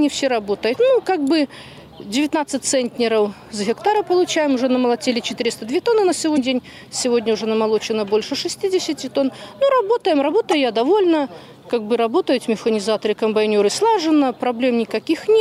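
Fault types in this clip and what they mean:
Damaged data in a compressed stream: corrupted bytes make the decoder misread frames and lose sync. This produces three brief garbled blips, about 26 to 44 ms long, at 0.72, 6.34 and 10.51 s.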